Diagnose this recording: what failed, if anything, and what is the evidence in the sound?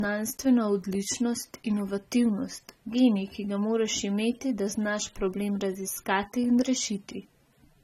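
The codec stage failed: this is most likely low-bitrate audio saved at a high bitrate, an earlier low-rate AAC-style encode later re-encoded as MP3. Throughout the speech there is nothing above 16.6 kHz, and the smeared, swirly texture of coarse transform coding persists from start to finish. The first encoder discarded that detail to save bits, and the generous second encode, which points to a rate near 256 kbit/s, simply preserved the damage rather than restoring it.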